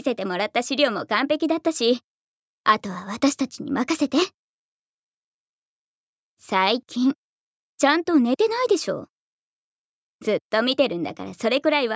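No technical faults can be heard anywhere in this audio.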